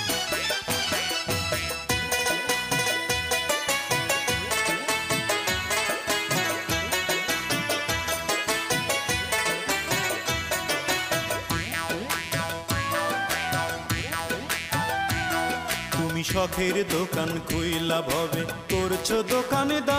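No technical faults can be heard anywhere in this clip.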